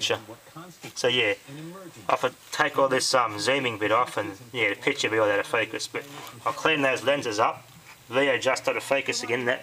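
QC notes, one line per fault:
No faults heard anywhere in this clip.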